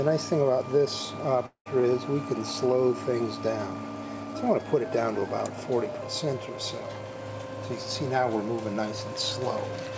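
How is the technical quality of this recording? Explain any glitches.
The recording has one glitch, a dropout, and it carries the band limit of a call path: nothing above 8 kHz, which points to a wideband codec such as G.722.

From 1.46 to 1.68 s there is a long network dropout, likely caused by packets failing to arrive. About 200 ms of audio is lost. The receiver extends the last sound for roughly 196 ms as a fading buzz or hiss, with about 90 ms of silence, before the audio resumes further along.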